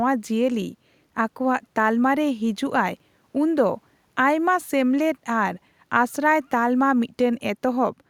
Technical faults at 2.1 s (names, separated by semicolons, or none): none